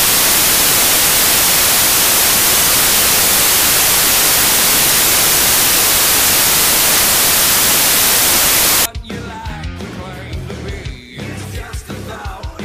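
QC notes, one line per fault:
0.00–8.86 s, samples built from the wrong bytes: the reader's stitching each sample's bytes together wrongly, so the jittery low bits end up as the big part of every value. You get loud, harsh broadband hash, close to white noise on the louder sounds.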